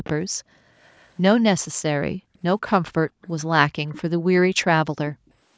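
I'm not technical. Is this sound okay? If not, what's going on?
No. There are two problems. The first is an echo leak: a faint, delayed second copy of the speech, about a sixth of a second behind, at 0.04 to 1.1 s, 3.22 to 4.01 s and, very faintly, 5.13 to 5.3 s. Unlike room reverberation, it's a distinct repeat, likely from a loudspeaker on the other end that the echo canceller didn't fully cancel.

The second is background gated by the echo canceller. The room sound briefly drops to near silence at 0.28 to 0.72 s, 2.14 to 3.22 s and 5.15 to 5.28 s, then returns. This differs from a dropout in the connection because the speech itself keeps going while the background disappears.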